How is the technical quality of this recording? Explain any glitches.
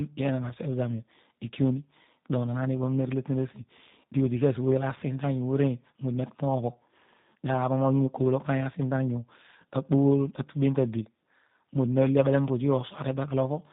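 The quality is poor throughout. Tandem speech coding runs the full length: two speech coders in series, consistent with G.726 then G.729A, each re-encoding the other's damage, leaving rough, muffled, warbly speech with nothing above 3.8 kHz.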